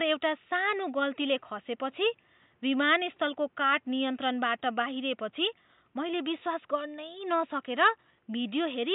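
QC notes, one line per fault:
No technical faults found.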